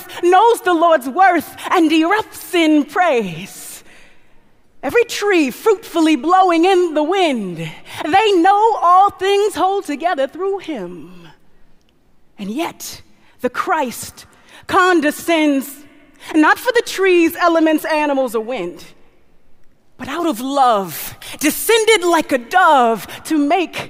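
From 20.20 s to 22.56 s the audio shows pre-emphasis left on. The treble lift applied before recording, matching the CD 50/15 µs curve, was never undone by the complementary de-emphasis filter, so high frequencies stay raised by about 8 dB at 10 kHz relative to 1 kHz. Across that stretch the sound turns thin and overly bright, with exaggerated sibilance and edgy upper harmonics.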